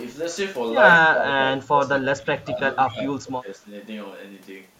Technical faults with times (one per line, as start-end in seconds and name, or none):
1.10-3.67 speech suppressed in double talk